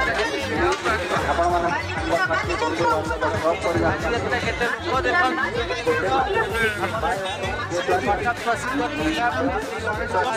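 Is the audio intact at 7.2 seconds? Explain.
Yes, the audio is intact at 7.2 seconds, with no dropout, click, distortion or other fault at that point.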